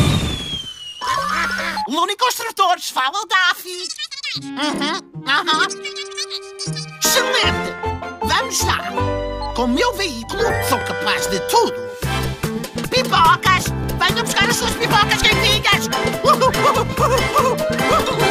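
A short stutter or click recurs at 4.76–4.79, 7.79–7.81, 10.81–10.84, 13.84–13.86 and 16.86–16.89 s, where about 25 ms of the audio is heard twice in a row. This is overlapping chunks: the audio was handled in blocks of roughly 3 s, and each new block begins slightly before the previous one ended. The overlap replays a 25 ms sliver at every join.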